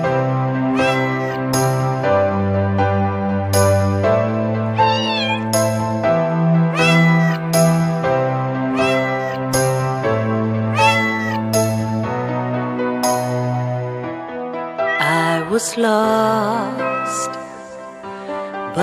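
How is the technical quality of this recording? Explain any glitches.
The technical quality of the recording is sound, with no glitches to explain.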